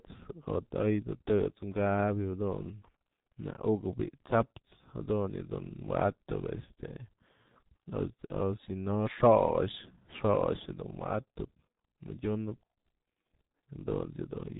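Speech with heavy G.723.1 codec damage throughout: muffled, hoarse, blurred consonants, and a spectrogram bare above 4 kHz, consistent with coding near 6 kbit/s.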